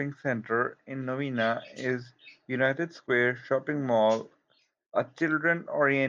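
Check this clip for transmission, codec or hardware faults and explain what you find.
No faults found.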